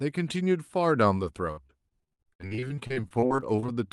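From 1.51 s to 3.70 s the speech breaks up with repeated packet loss, giving a robotic sound. Frequent short gaps, the longest about 60 ms, are each patched by extending the preceding sound. Roughly a third of that stretch is filled this way, so the speech turns choppy.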